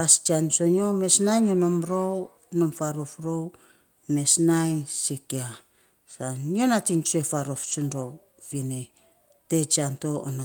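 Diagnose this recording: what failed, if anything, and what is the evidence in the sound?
Network stage: four 20 ms frames, each a lost packet rebuilt from error correction, at 0.77, 4.67, 6.57 (before "nating tsue faarof") and 7.71 s (after it). The low-bitrate copies leave no waveform gap, only brief rough, noisy slivers on the spectrogram.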